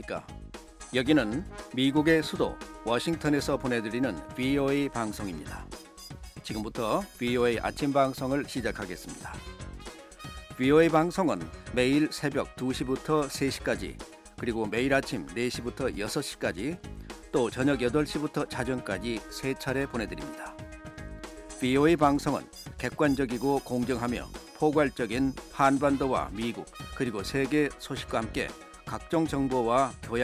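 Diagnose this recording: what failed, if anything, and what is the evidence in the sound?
Nothing in the signal chain audibly failed: the level, continuity and timing hold steady throughout the recording, with no stage showing any sign of trouble.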